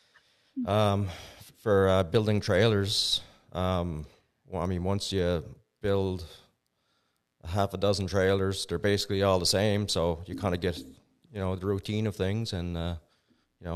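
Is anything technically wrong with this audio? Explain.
No, nothing in this speech recording stands out as a technical problem; it all sounds the way it should.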